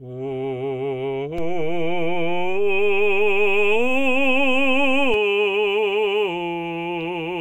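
A music clip with a DC step: at 1.38 s the waveform's zero line jumps by about -21 dBFS and holds until 5.14 s, where it drops back, giving a low thump at each edge. The waveform shows a visibly shifted baseline; the spectrogram shows brief broadband, low-weighted vertical lines at both steps.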